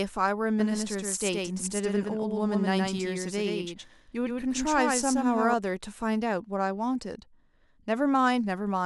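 A doubled audio track runs from 0.60 s to 5.54 s: a second full-band copy of the speech trails about a tenth of a second behind, roughly 5 dB quieter, with no decay, and cuts in and out abruptly, likely from a slower duplicate capture path.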